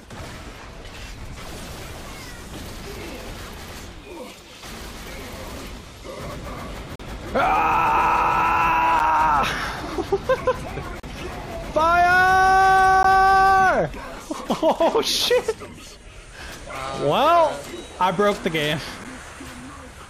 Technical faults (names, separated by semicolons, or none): gap between stream segments